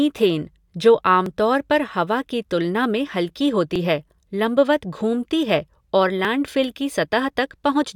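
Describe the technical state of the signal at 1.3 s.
At 1.26 s the speech has a short dropout, just before "तौर पर हवा की". A few milliseconds of audio are missing and the two sides butt together with no gap, so the flow jumps abruptly rather than pausing. This is most likely audio missing between chunks: the recorder or processor drops a sliver while closing one block and opening the next, consistent with a 2.5 s chunk boundary.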